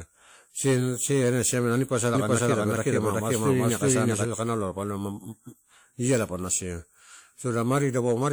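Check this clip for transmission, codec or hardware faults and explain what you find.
One fault: from 2.15 to 4.25 s, just after "ani posa", a doubled audio track, a full-level copy trailing roughly 400 ms behind, likely from a second, slower capture path.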